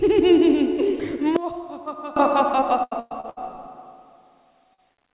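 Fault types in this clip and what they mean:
One channel inverted: The level drops by about 20 dB between 1.36 and 2.16 s, leaving a faint remainder for that 0.8 s before the full sound returns. The likely cause is one stereo channel with reversed polarity: when the two channels are summed to mono, everything they share cancels, and only the small difference between them survives.
Repeated packet loss (robotic sound): From 2.6 to 3.53 s, audio packets went missing again and again. That left five gaps totalling about 300 ms, the longest 112 ms, and about 39% of the stretch is made-up audio. Each gap was patched by stretching the last sound forward, so this stretch turns choppy, with fragments dropping out. The band is already limited to 4 kHz by the G.711 call codec.
Short concealed packet loss: Twice near the end, brief stretches of audio never reached the decoder in time. There is a 40 ms hole at 4.74 s and a gap of about 20 ms around 4.94 s. 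Each time, the receiver filled in by continuing the preceding sound and then blended back into the real signal. Neither is a clear dropout. Each is a quick smear or wobble, and any very short sound falling in those moments could simply disappear.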